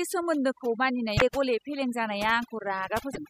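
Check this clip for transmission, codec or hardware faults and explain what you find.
Two faults are present in this speech recording: heavy noise processing throughout, and two brief decoding glitches from corrupted stream data.

Overdone noise removal runs the whole clip. Bands near the noise estimate are suppressed, leaving near-silence with twinkling specks, which show as isolated spectrogram dots.

Damaged data in a compressed stream hits at 1.14–1.22 s and 3.10–3.18 s. The decoder loses frame sync, producing short glitches that appear as waveform discontinuities.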